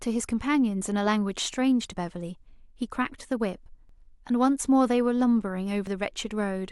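Short skips in the speech occur at 1.92, 3.89 and 5.87 s, about every 2 s. Each drops roughly 20 ms, with the two sides joined directly. This is likely audio missing between chunks, lost as each 2-second chunk closes and the next opens.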